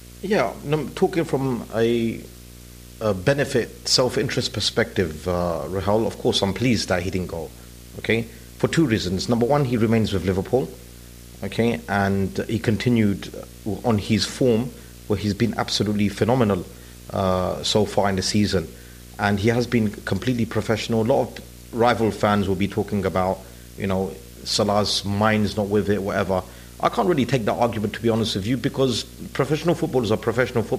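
Speech runs over video or display buzz throughout, a 59.94 Hz field-rate buzz with hash and a 15.7 kHz line tone, roughly 20 dB down, from screen or cable coupling. A spectrogram shows harmonic stripes plus a steady high line.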